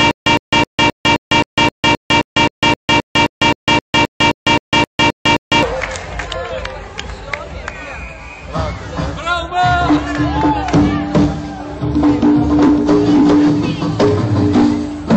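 From the start to 5.63 s the audio shows stutter with silent gaps. A 110 ms fragment repeats every 263 ms with 152 ms of digital silence between, unlike plain dropouts, which never replay audio. This is likely a stalled stream retrying. Throughout, watery, swirly MP3 compression points to a low bitrate near 64 kbps, rather than broadband noise or distortion.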